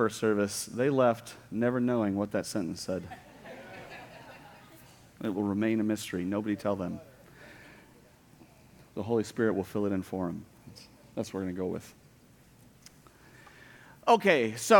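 A string of small, evenly spaced ticks runs from 1.25 s to 5.25 s, one each second, about five in all. Each is a brief break in the signal, well under a millisecond, filled with silence, so it registers as a dry click only because sound is playing through it. These are periodic USB or driver dropouts: something repeatedly stalled the audio driver or USB transfer on a one-second schedule, and the missing samples were replaced by gaps.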